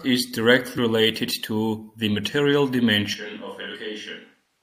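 Compressed frames skipped at 0.77 s: about four 23.2 ms frames never decode, so the speech jumps ahead roughly a tenth of a second with a brief smeared blip. Switch to a distant microphone at 3.14 s, just after "to 'the material": the voice suddenly turns hollow and roomy, about 10 dB quieter, with room noise roughly 35 dB below the speech, lasting to the end, likely because the close microphone's feed dropped out. Compressed frames skipped again at 3.74 s, this time about two frames, a 50 ms jump.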